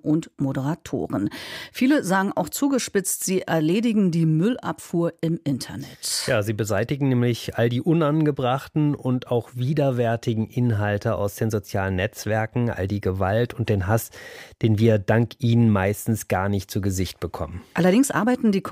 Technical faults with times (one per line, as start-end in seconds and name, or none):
none